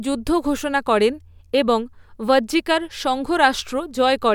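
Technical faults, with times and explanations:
Nothing stood out on listening to this speech recording.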